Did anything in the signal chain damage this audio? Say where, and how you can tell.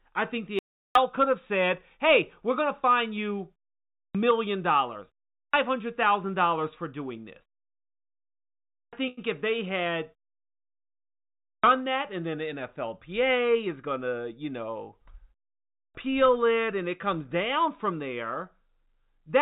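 Yes. An audio dropout to silence at 0.59–0.95 s leaves about 365 ms of silence with no room tone, likely an input link briefly lost upstream of the encoder.

A clipped start after a pause appears at 4.02 s (after "going to fine you"), 5.4, 8.8, 11.5 and 15.81 s (before "it and it comes"). Each loses roughly 130 ms of onset as the playback device wakes.

A short stall from a late packet occurs at 9.08–9.19 s, holding sound for 92 ms, and at 16.10–16.28 s for 19 ms. The jitter buffer ran dry and stretched the last audio.

A jitter buffer speed-up at 13.11–13.87 s, just before "to you know", runs about 8% fast at unchanged pitch. The receiver trimmed several tens of milliseconds of pitch periods from the G.711 call path, which is band-limited to 4 kHz.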